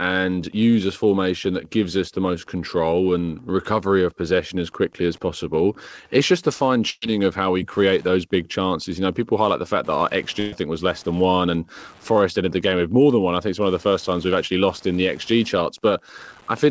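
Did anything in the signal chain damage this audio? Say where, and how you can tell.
Yes. Wi-Fi interference entered at the analogue wiring: steady ticking every 102.4 ms, roughly 35 dB below the speech, shows as evenly spaced vertical broadband lines on a spectrogram.

A burst of packet loss on the network hit at 6.90–7.04 s and 10.40–10.54 s. Concealment repeats and fades about 120 ms of sound, seen as smeared, decaying spectra, then skips 120 ms.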